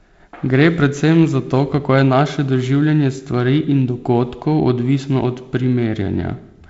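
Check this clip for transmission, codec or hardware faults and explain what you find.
No transmission, codec or hardware faults can be heard in this speech. The G.722 wideband telephone coding path is working as it should: the audio reaches up to about 7.7 kHz and then stops, and a light coding texture in the lower band is consistent with the 48 kbit/s mode.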